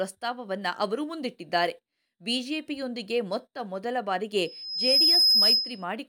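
A microphone picking up the loudspeaker it feeds has closed an acoustic loop whose gain exceeds one near 5.1 kHz, so loudspeaker feedback squeal takes over this speech recording from 4.45 s to 5.85 s. The tone swells out of the sound over roughly half a second, then holds as a piercing, steady whistle sitting around 10 dB above the speech, until it stops shortly before the end.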